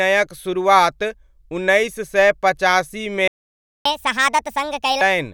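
At 3.28 s the speech cuts out and stays silent until 3.85 s, a gap of about 0.58 s. This is a playback stall, likely caused by the player running short of data or its thread being blocked. The speech then resumes where it left off.

From 3.85 s to 5.01 s the player plays catch-up at higher speed. It resamples the backlog at 1.5 times normal speed. Tempo and pitch rise together, roughly seven semitones higher, so the speech sounds hurried and chipmunk-like. Then it settles back to normal.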